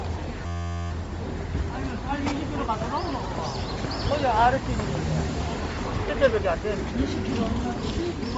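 From start to finish the sound has nothing above 7.7 kHz and a breathy, grainy upper edge where noise fills the zeroed band, the likely mark of Bluetooth LC3 compression. Unlike plain low-pass filtering, the damage comes from coding in short frames, fitting 10 ms LC3 at around 32 kbps.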